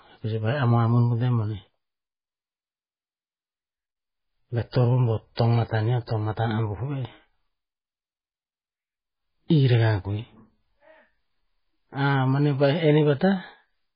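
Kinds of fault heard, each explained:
MP3 compression: Throughout the speech, nothing above 5 kHz survives, and weak frequency lines flicker between frames, giving a heavy watery, swirling texture and metallic chirps on s sounds. This points to a bitrate near 16 kbps, likely from an MP3 encoder.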